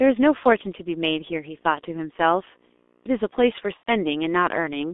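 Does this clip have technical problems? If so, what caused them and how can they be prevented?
Yes. The speech runs through the G.723.1 codec at 6.3 kbit/s, confined to roughly 250 Hz to 3.6 kHz, so it sounds muffled and hoarse with smeared consonants. The coarse 30 ms frame updates cause the heavy roughness, which separates it from simple band-limiting that stays clean. Using a wideband codec at a higher bitrate would prevent it.

VoIP packet loss concealed by the speech codec occurs from 3.77 to 3.90 s. About 90 ms went missing, which fits three lost 30 ms frames. The decoder stretched its last pitch and filter into a fading buzzy tone or coloured noise. Unlike a plain dropout, the gap is filled at first, then muted from the third lost frame. Jitter buffering and forward error correction on a steadier network would prevent it.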